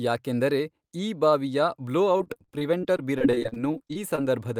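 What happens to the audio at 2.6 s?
Repeated packet loss (robotic sound) is under way at 2.6 s, part of a stretch running from 2.17 to 4.19 s. Audio data keeps failing to arrive, and each hole is papered over by extending the last bit of sound before the next hole arrives. Around twenty such gaps, the longest about 41 ms, leave roughly a fifth of the span concealed, so the speech turns choppy, with fragments missing.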